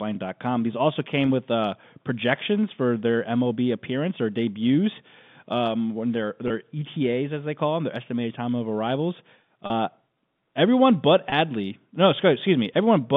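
Packet loss with pitch repetition occurs three times: after "debuts um when their" at 6.48–6.50 s, after "estimated time of arrivals" at 9.66–9.70 s (40 ms, about two 20 ms packets), and after "everyone but" at 11.30–11.32 s. The receiver loops the last pitch cycle, producing a brief buzzy hold over the telephone band rather than the silent gap or click of a plain dropout.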